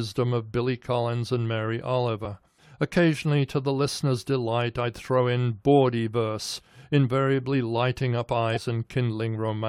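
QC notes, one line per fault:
8.51–8.58 s, compressed frames skipped: just after "verse invariably lighting up" the audio jumps forward by roughly 50 ms, where whole coded frames were lost or rejected by the decoder.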